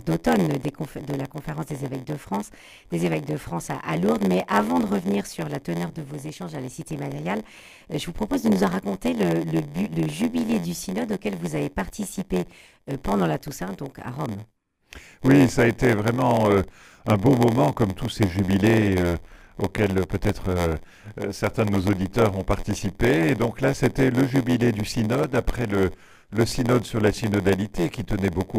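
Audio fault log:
Throughout, block size mismatch (padded): each block arrives short and is topped up with silence, chopping the audio into an 86.1 Hz buzz, which fits 512-sample reads. Playback runs at 0.938× speed. Waveform shows regular flat gaps; spectrogram shows evenly spaced vertical stripes.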